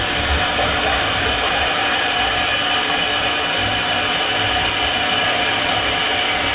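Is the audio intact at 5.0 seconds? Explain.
Yes, the audio is intact at 5.0 seconds, with no fault at that moment.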